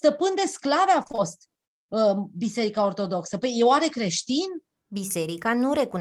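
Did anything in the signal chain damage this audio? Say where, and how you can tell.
Yes. Repeated packet loss (robotic sound) hits the network stage from 1.03 to 1.20 s. Four gaps, the longest 23 ms, were patched by extending the last audio, covering about half that span. A spectrogram shows frozen, copied harmonic blocks between abrupt vertical seams.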